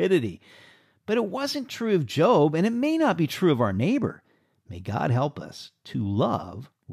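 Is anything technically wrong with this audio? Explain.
No, nothing in this clip points to a technical problem. The speech comes across steadily, and no fault can be heard at any point.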